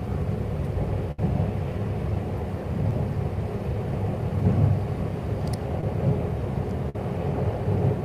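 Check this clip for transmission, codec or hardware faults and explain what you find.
Two kinds of network fault are audible, both from audio packets that did not arrive in time to be played.

At 1.11 to 1.19 s and again at 6.89 to 6.95 s, the sound stalls into a held, dimming continuation of whatever came just before, then picks up further along with a piece gone. This is a burst of packet loss: several consecutive packets went missing, and the receiver stretched the last good sound while fading it down to cover the hole. About 67 ms was filled in the first gap and about 51 ms in the second, with roughly 60 ms and 40 ms of the original audio lost.

Two much smaller blips occur at 2.90 s and at 5.81 to 5.83 s: a brief smear or wobble rather than a stall. These are short concealed packet losses. Only a sliver of audio failed to arrive, about 10 ms and 20 ms respectively. The decoder patched each hole by extending the preceding sound for about 8 ms and 14 ms, then crossfaded back into the real signal.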